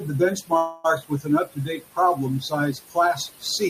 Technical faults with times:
0.00-3.70 noise suppressor artifacts
0.00-3.70 speech cut by the noise suppressor
0.57-0.86 call audio freeze

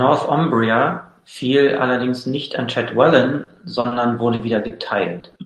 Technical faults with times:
3.43-3.94 repeated packet loss (robotic sound)
4.35-4.42 short concealed packet loss
4.67-4.78 short stall from a late packet
5.20-5.39 short concealed packet loss

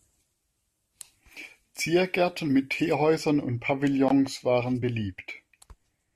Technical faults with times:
1.37 compressed frames skipped
2.95-6.15 de-emphasis applied wrongly
4.82 compressed frames skipped

